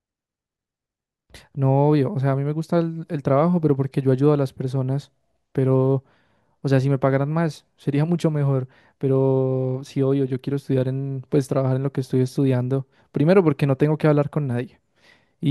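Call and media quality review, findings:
Nothing to flag on this speech recording; no faults turned up on review.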